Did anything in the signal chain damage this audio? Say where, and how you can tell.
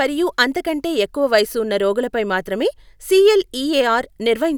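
No, nothing along the way seems to have harmed this speech recording, and there's nothing in it that points to any part of the chain misbehaving.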